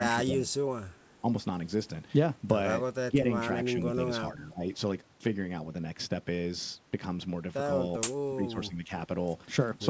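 Speech suppressed in double talk hits this speech clip at 0.0–0.67 s, 1.21–1.26 s, 3.09–3.5 s, 4.21–4.64 s and 8.34–8.91 s. The talker dips by up to about 20 dB, likely because an echo canceller could not separate this talker from overlapping far-end echo and ducked both.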